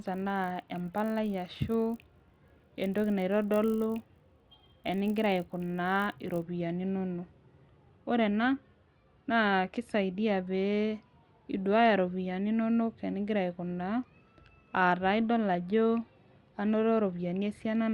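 Speech, and for the first 6.42 s there's a steady 50 Hz buzz riding on it, which is the resampler restarted on every block. Each 20 ms block gets converted without its neighbours, so every edge picks up a small error. It fits a 24 kHz to 48 kHz upsampling step.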